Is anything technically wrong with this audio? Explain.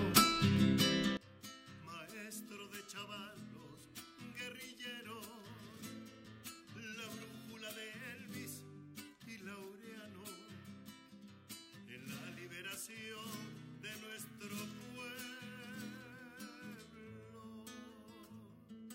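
Yes. From 1.17 s to the end, the sound drops by about 22 dB when summed to mono, which points to one channel inverted. The likely cause is reversed polarity on one stereo channel, so shared content cancels, leaving only a faint difference signal.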